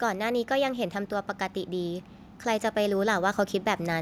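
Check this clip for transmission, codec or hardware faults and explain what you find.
One fault turns up, and it comes from gain control rather than transmission or codec damage. Automatic gain rising, from 0.47 s to 3.97 s: the automatic gain control judged the incoming speech too quiet and pushed its amplification up slowly, adding about 5 dB across roughly three and a half seconds. Because the gain acts on the whole signal, the voice and the background noise floor swell together, so the clip grows steadily louder rather than jumping.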